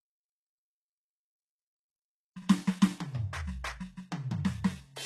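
From start to finish the music carries HE-AAC compression damage, likely from a low bitrate around 16 kbps. The treble is present but synthetic, copied up from lower bands with harmonics that don't align, so it sounds gritty and metallic rather than merely dull, then stops entirely above 12.3 kHz.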